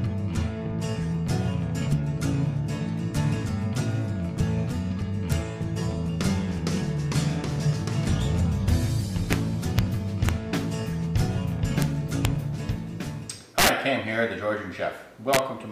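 Integer overflow cracks the audio at 5.32, 9.33, 9.79, 10.29, 11.82 and 12.25 s, then from 13.59 to 13.69 s (about 6 dB over) and 15.33 to 15.39 s, where peaks wrap to the opposite sign, showing as large vertical jumps and broadband spectrogram streaks.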